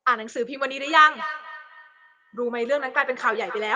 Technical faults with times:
0.77-3.75 feedback echo between two devices

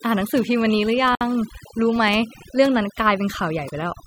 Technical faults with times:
0.00-4.06 overdone noise removal
1.15-1.21 gap at a join of encoded pieces

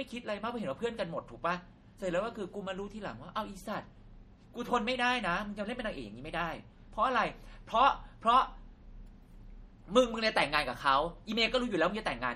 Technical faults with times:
0.00-12.35 MP3 compression

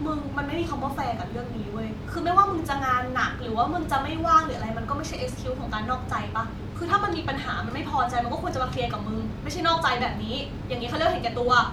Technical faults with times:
none

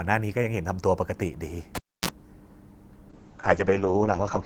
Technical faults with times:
1.75-2.09 cable pulled and plugged in
3.11-4.45 call bitrate drop

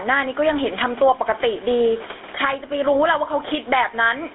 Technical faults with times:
0.00-4.35 gain pumping
0.00-4.35 GSM full-rate codec

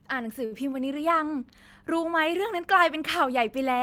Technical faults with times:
0.45-0.53 short stall from a late packet

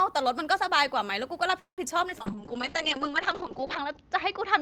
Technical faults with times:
1.59-1.81 call audio freeze
2.10-2.23 short concealed packet loss
2.20-4.61 call bitrate drop
2.30-3.01 jitter buffer slow-down

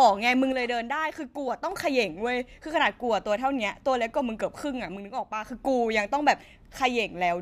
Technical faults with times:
0.52-1.71 one channel drops out
4.96-5.45 one channel drops out

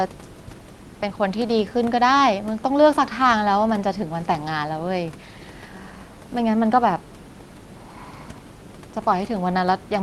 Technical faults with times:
none

